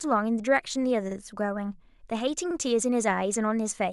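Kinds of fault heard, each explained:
Repeated buffer: at 1.12 s and again at 2.51 s, a slice of speech about 46 ms long plays twice in a row, heard as a quick stutter with a hard seam where the copy begins. Fresh audio didn't reach the output in time, so the device replayed the block it had just sent. The length of each repeat fits a 2048-sample buffer, and essentially nothing is skipped afterwards; the speech is only delayed by the duplicate.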